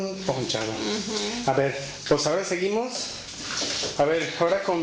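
No technical faults can be heard anywhere in this clip.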